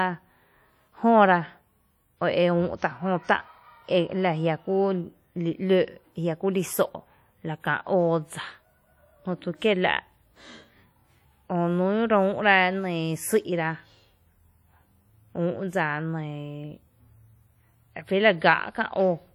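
Throughout the speech, a ringing, washy smear and a hiss that breathes with the signal are plainly audible. This is likely WMA compression at a low bitrate.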